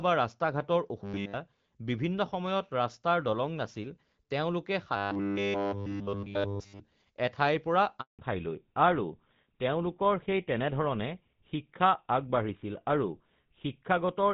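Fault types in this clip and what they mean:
Robotic sound from repeated short buffers: a rigid, metallic buzz at 100 Hz over the sound from 1.04 to 1.34 s and 4.96 to 6.80 s, likely from the same 10 ms stretch replaying with almost nothing new let through. Unlike a gap, the sound never stops; it turns mechanical.
Handover gap: the sound fades out within a few tens of milliseconds and stays silent for 180 ms, from 8.01 to 8.19 s, while the call switches networks. Unlike the robotic fault, nothing replaces the missing audio, and whatever came in that window is simply gone.
Fallback to narrowband: from 8.19 s to the end nothing remains above 4 kHz, so the sound is duller and rougher, pointing to a switch from HD Voice to a GSM-type narrowband codec. Unlike the gap, it is a lasting change in tone, not an interruption.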